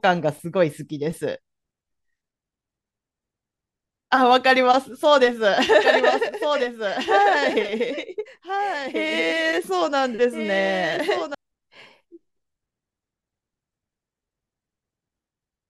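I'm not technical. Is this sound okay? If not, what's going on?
No. From 5.79 to 11.35 seconds there is a doubled audio track: the speech plays twice at once, with a second copy trailing about a second and a half behind, a little quieter than the original. Unlike a natural echo, the copy doesn't fade or sound roomy, and it cuts in and drops out suddenly. It likely came from the same sound being recorded a second time through a slower route, or from an edit that left two misaligned copies.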